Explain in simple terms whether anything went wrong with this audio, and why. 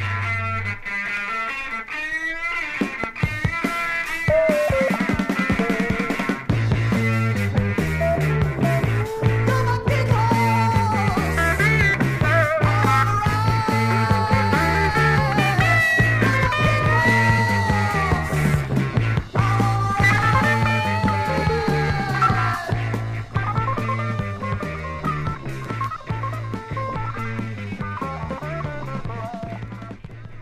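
Nothing went wrong with this recording that a listener can pick out. There is no moment where the sound breaks up, jumps or changes in a way that points to a technical problem.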